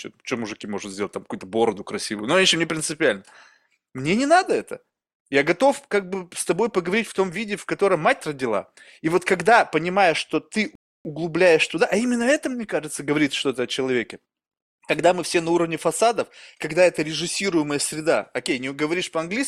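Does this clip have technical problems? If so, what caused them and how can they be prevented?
Yes: a rebuffering stall from 10.75 to 11.05 s inserts about 0.3 s of silence when playback starved. Speech resumes exactly where it stopped, unlike a dropout, which loses audio. Buffer more ahead or lower the stream bitrate.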